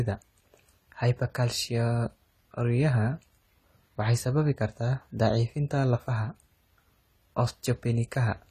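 Likely low-bitrate AAC compression, consistent with about 32 kbps, runs throughout, leaving the speech dull and smeared, with nothing above 14.1 kHz and a fizzy, warbling edge on sibilants.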